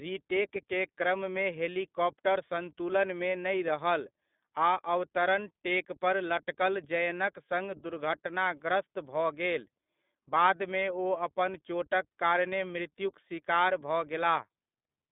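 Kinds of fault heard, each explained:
iLBC codec: throughout, the speech is limited to 200 Hz–3.6 kHz and sounds plainly rough and synthetic from independently coded 20 ms frames, which fits a 15.2 kbps mode.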